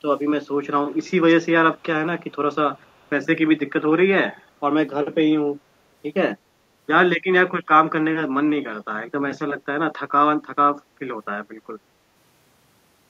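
Early on there's echo leak: faint, delayed copies of the speech trailing about 270 ms behind, at 0.88–0.97, 1.75–1.83, 2.76–3.09 and 4.36–4.42 s. They sit very low, around 35 to 40 dB down, likely from a far-end loudspeaker whose echo canceller let scraps slip back.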